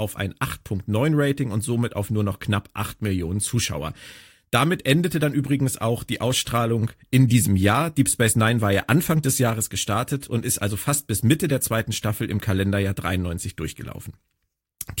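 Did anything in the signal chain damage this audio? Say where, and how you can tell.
No, nothing in this speech stood out on listening as a sign of damage anywhere in the signal chain.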